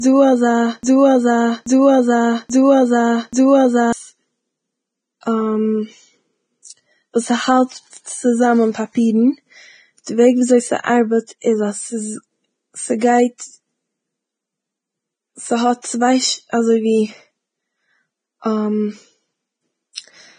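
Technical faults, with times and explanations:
Throughout, Vorbis compression: the whole clip is hissy and grainy, with nothing at all above 9.7 kHz. Vowels have a roughened edge, and consonant onsets are smeared rather than crisp. That points to a low-quality Vorbis encode, likely in the region of 22 kbps. At that rate the codec drops the treble and quantises what's left so coarsely that fine spectral detail turns into noise of roughly the same energy. That's where the hiss and grain come from.
0.00 to 3.93 s, broken-record loop: the clip opens in the middle of a stuck repeat. A fragment about 0.83 s long plays back to back, identical each time, four times over before normal playback resumes. You can hear the same chunk cycling. This is likely a stall in the player, encoder or stream, which kept re-sending the last piece it held. Whatever should have played during those four seconds is simply gone.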